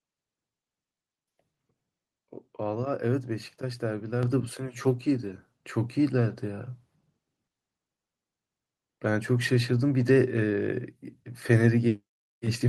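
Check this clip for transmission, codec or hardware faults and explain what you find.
One hardware-side fault stands out: a microphone volume step-up at 4.23 s. At that instant the input level jumps by about 6 dB in a single step and stays there. The call software judged the microphone too quiet and raised the device's input volume all at once. Unlike a talker leaning closer or a gradual gain-control ramp, the change is instantaneous and lifts the background noise by exactly the same amount as the speech. The speech is carried through a call codec whose top end stops near 12 kHz, which fits Opus at a moderate bitrate.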